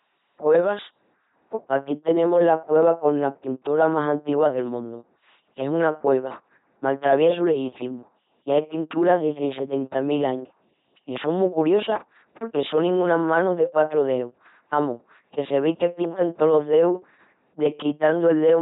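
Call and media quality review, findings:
LPC-10 vocoder, entire clip. Speech is buzzy and robotic, with heavy damage throughout. Each frame is rendered as either a pitch-pulse buzz or noise through a ten-pole vocal tract filter, so natural voice texture is lost. Misjudged voicing produces stray buzz or hiss. Heavy 2.4 kbit/s parametric coding. Band-limited, with nothing above 3.9 kHz.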